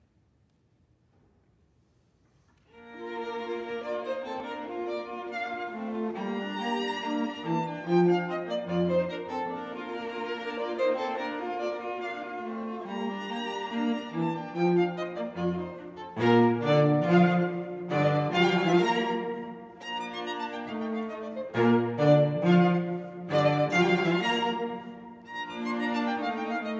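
No technical faults are audible anywhere in the recording.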